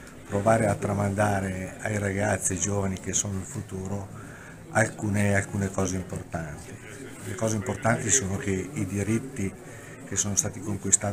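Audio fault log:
No faults detected; signal path nominal throughout.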